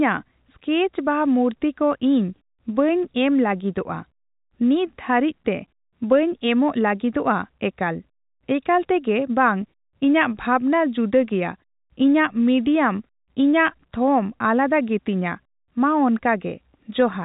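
No technical faults can be heard in this speech. It carries the narrow band of G.711 telephone coding, with nothing above about 3.8 kHz, and the background falls silent in the pauses between phrases.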